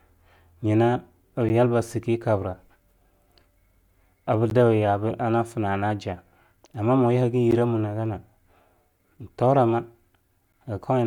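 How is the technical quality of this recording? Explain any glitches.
Four brief gaps between chunks interrupt the speech at 1.49 s (just before "shi kabra"), 4.5 s, 7.51 s and 10.52 s. Each is a hard-edged 12 ms silence recurring every 3 s where audio chunks join. Unlike dropouts, no sound goes missing; it is only pushed apart.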